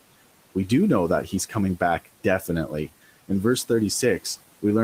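Noise suppressor artifacts run through the whole recording. The suppressor estimates the steady background in each frequency band and pulls those bands down frame by frame, cutting the noise by about 18 dB. The room noise, which sits about 19 dB below the speech, drops away in the gaps between words and comes back up underneath them as the speech opens the bands again, so the background audibly pumps in step with the talker.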